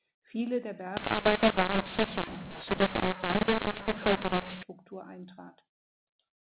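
Telephone speech over G.711 coding, with nothing above 4 kHz. From 0.97 to 4.63 s it turns harsh and distorted, and noise fills the pauses. This is a mu-law and A-law mix-up. Mu-law samples are decoded as A-law, so levels scramble and near-silent samples jump well above silence.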